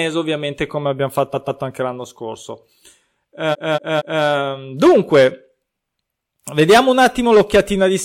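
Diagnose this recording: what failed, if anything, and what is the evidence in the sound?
Repeated frames at the codec or storage stage. After "ovviamente come abbiamo", from 1.33 to 1.60 s, a 139 ms block plays twice more before "anche l'anno scorso". From 3.51 to 4.21 s, a 232 ms block repeats three times. Duplicated compressed frames cause these stutters, adding 0.98 s.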